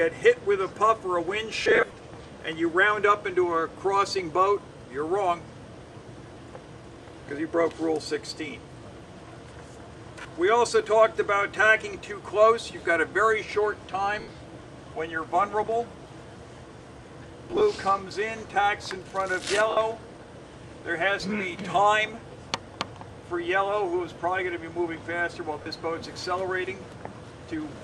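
Short noisy smears replace the audio at 1.63 to 1.97 s (scattered gaps, longest about 40 ms), 6.33, 10.22, 14.20, 17.51, 19.70 and 25.62 s. These are lost LE Audio frames: the LC3 decoder refilled each gap with the previous spectrum under randomised signs.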